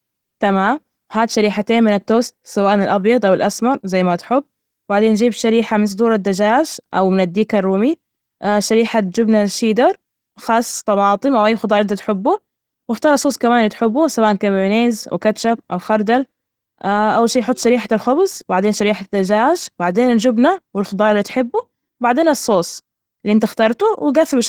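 A speech recording, with no technical faults to be heard anywhere in it. Nothing in the audio calls for a time or a cause to be given.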